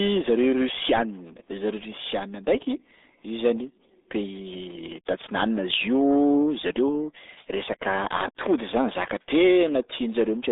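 From start to finish, the speech carries the sound of the RealAudio 14.4 codec. The band is squeezed to roughly 250 Hz to 3.7 kHz, and nothing passes above 3.8 kHz. The coder models each short stretch of speech with very few bits, which fits an 8 kbit/s dial-up rate. The damage is heavy. Sibilants lose their edge. Vowels turn muffled and gargly, with a watery, bubbling texture.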